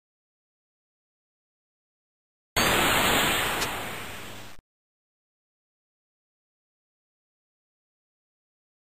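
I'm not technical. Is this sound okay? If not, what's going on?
No. From 3.39 to 3.67 s there is a brief burst of scratching, rustling noise, fairly prominent against the sound. This is cable scratch noise, likely from a worn cable or connector being moved, its unsteady electrical contact briefly adding crackle.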